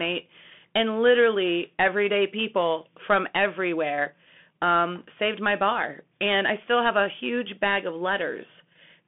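A Bluetooth CVSD headset codec shapes the speech from start to finish. Nothing above about 3.8 kHz survives, and the useful band sits roughly between 200 Hz and 3.5 kHz, which fits a 64 kbit/s one-bit delta stream. The encoder sends only up or down for each sample with an adapting step, so loud, fast-rising sounds outrun it and distort, sibilants turn scratchy, and a grainy hiss runs beneath the speech throughout.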